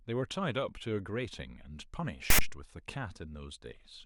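A block of file tags, text followed by zero padding, was played as audio inside this speech clip from 2.30 to 2.41 s. The text bytes become a loud, lopsided rasp offset to one side, and the padding drops straight to silence, all with hard edges.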